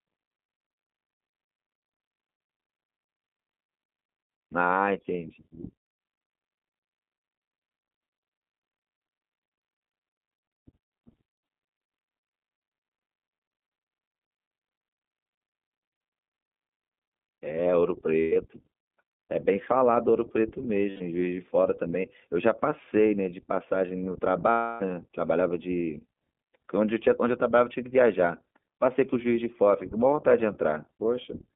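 The speech passes through the iLBC codec, a narrowband VoIP coder that codes each 20 ms frame on its own, which fits its 15.2 kbps mode. The line is limited to about 200 Hz to 3.6 kHz, so everything above is missing. The codec damage is plainly audible: the speech sounds thin, slightly rough and synthetic.

Lost iLBC frames follow, where the decoder fills missing packets by repeating the last pitch cycle mixed with noise:

At 11.86 to 11.88 s, a single 20 ms frame drops, heard as a brief buzzy blip.

From 18.21 to 18.36 s, about 140 ms is lost, scattered over 160 ms. The longest unbroken gap is around a tenth of a second, giving a stuttering, held vowel-like buzz.

From 20.90 to 21.02 s, 100 ms is concealed as a short breathy sustained tone.

From 24.50 to 24.82 s, the longest loss, 300 ms, becomes a held buzzy vowel that fades before the speech snaps back almost immediately.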